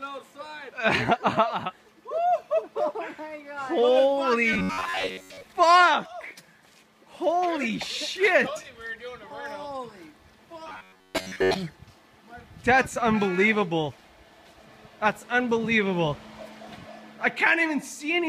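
At 4.53 s and again from 10.67 to 11.56 s the sound goes robotic, a rigid metallic buzz at 93.8 Hz that only loosely follows what's underneath, lasting just under a second each time (the first run ends at 5.46 s). It's likely robotic sound from repeated short buffers: audio arrives too late, so a chunk of roughly 11 ms gets looped while most of the real material is skipped, and that loop rate sets the buzz.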